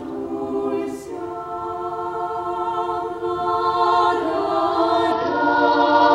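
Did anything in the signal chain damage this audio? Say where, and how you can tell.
Yes. At the codec stage, a Bluetooth SBC bit pool drop runs from 5.12 s to the end. The treble dulls and gritty quantisation noise rises as the encoder starves upper sub-bands and coarsens the rest, which fits a bit pool cut from 31 to about 9, near 72 kbps.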